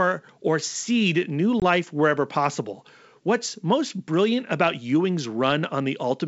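Packet loss on an ADPCM call at 1.60 to 1.63 s, after "or seed new": a hard 20 ms silence, then slightly distorted speech while the decoder's predictor resynchronises.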